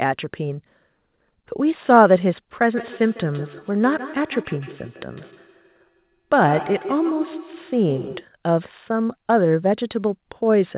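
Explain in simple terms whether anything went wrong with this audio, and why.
From 2.77 s to 8.28 s the speech picks up a feedback echo between two devices. Two devices in the same room are on one call: one plays back what the other's microphone sent, and that microphone hears it again. Each sound returns at a steady beat of roughly 150 ms, thinner and more ringing each time. Unlike room reverberation, which is a smooth blur, these are distinct, evenly spaced repeats, and they stop once the loop is broken.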